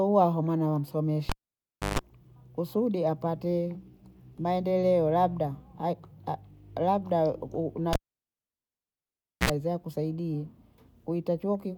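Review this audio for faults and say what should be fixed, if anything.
A live cable was pulled and plugged in twice, breaking the signal path while the input stayed open. At 1.29–1.99 s a pop drops the speech into near silence for 0.65 s, then 0.15 s of 50 Hz mains buzz as only the tip touches, and a second pop before "kusudi apate". At 7.93–9.50 s the gap lasts about 1.52 s, with 62 ms of 60 Hz buzz before "hiza kusaidii". Secure the connectors and mute the channel before touching any cable.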